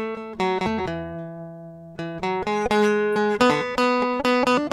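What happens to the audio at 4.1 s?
At 4.1 s the music plays through intact, with no dropout, click, distortion or other fault at that point.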